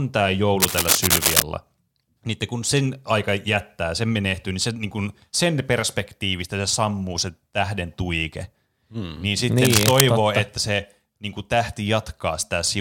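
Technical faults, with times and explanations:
0.60–1.42 s and 9.58–10.01 s, cable scratch noise: dense, uneven scratching and rustling sits over the speech, first somewhat louder than it, then about equal, the second burst ending just before "totta että se niin". Likely a worn cable or connector shifting, its contact resistance fluttering rapidly.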